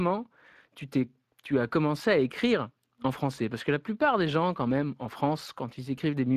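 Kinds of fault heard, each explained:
Speex codec: This CELP speech codec spends limited bits on the excitation signal. Here the damage is plainly audible for the whole clip, giving the speech a noisy, hoarse edge. Nothing reaches above about 15 kHz. The sound fits a bitrate near 22 kbps.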